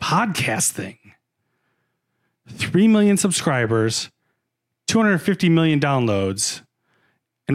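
Nothing in this recording stands out as a technical fault; the speech just runs along without any glitch, dropout or odd jump to point at.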